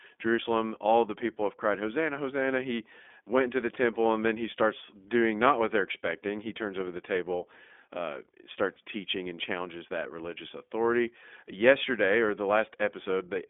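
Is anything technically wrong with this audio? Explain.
Yes, there are two problems. Throughout, the speech passes through the iLBC codec. Each short frame is coded on its own, which fits the 20 ms, 15.2 kbps mode, and the line band keeps only 250 Hz to 3.5 kHz. The result is plainly rough and synthetic. A spectrogram shows a hard ceiling at 3.5 kHz and empty lows below 250 Hz.

From 8.74 to 8.78 s come lost iLBC frames, about 20 ms of missing audio. The decoder fills the gap by repeating the last pitch cycle blended with noise, so it sounds like a brief buzzy, held vowel. On a waveform this appears as a short, regular repeated cycle, and the speech is clean again immediately afterward.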